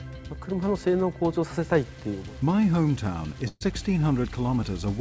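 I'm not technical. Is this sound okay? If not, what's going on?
No. From 1.65 s to the end at about 5 s, the audio takes on a rough, sandy graininess that rises and falls with the sound itself. This is most likely low bit depth without dither: the sound was stored with too few steps, about 7 bits, and each value was rounded to the nearest step. Ordinary background hiss stays steady even in pauses, but this grit follows the sound and gets harsher as it gets quieter.

At 3.48 s there is a burst of packet loss lasting until 3.63 s. A chunk of the transmission never arrived, so the receiver kept repeating the last bit of sound for about 0.13 s, a held, stretched sound that fades away, then briefly went silent. When the audio returns, about 0.12 s of the original is simply gone. A plain dropout would cut straight to silence, but here the smeared hold before the gap and the jump forward afterward give it away. 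The call connection itself carries nothing above 8 kHz, which takes a little sparkle off the top.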